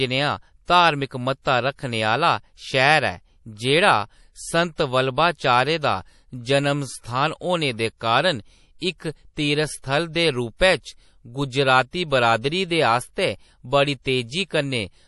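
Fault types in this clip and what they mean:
MP3 compression: plainly audible codec damage throughout this speech, with a watery, swirly texture and smeared consonant onsets, likely from low-bitrate MP3 encoding near 48 kbps. A spectrogram shows a flat cut with nothing above 11.5 kHz and flickering gaps in weaker bands.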